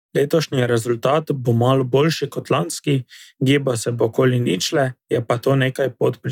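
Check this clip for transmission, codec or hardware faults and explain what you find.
No faults can be heard in this speech recording. At no point does the sound change in a way that would point to a problem in the chain that carried it.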